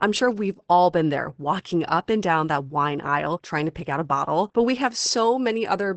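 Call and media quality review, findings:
Opus voice compression, full clip. Codec running low-rate SILK linear-prediction mode, wideband; coarse excitation coding, band cut at 8.4 kHz. Nothing above 8.4 kHz; speech dulled, hoarse, slightly robotic throughout, damage plainly audible. Fits a bitrate near 12 kbps with 20 ms frames. Probable component: sender's Opus encoder configured for low-bitrate voice.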